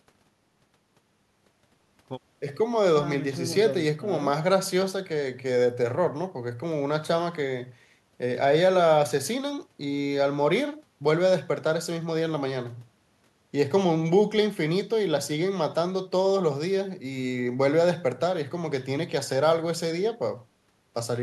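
No audible technical faults.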